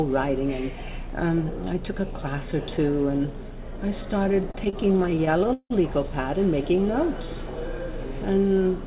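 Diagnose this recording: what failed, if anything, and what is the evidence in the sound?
Network and jitter buffer: repeated stalls (stutter) from 4.24 to 5.72 s. Late packets emptied the buffer. Repeated sound filled about 30% of that span, 169 ms at most, over the 4 kHz-limited call band.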